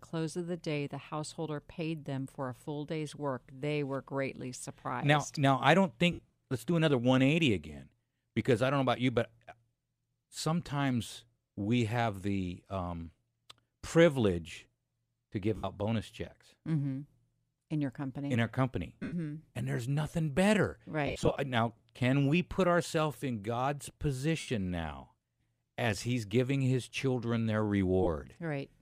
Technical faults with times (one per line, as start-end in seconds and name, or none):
6.13-6.32 lost LE Audio frames
15.57-15.64 lost LE Audio frames
19.03-19.13 lost LE Audio frames
21.07-21.36 lost LE Audio frames
24.39-24.48 lost LE Audio frames
28.03-28.07 lost LE Audio frames